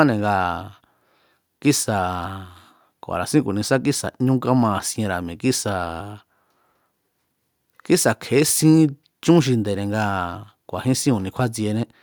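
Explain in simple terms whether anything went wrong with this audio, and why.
Nothing stood out on listening to this speech recording; it sounded the way it should the whole way through.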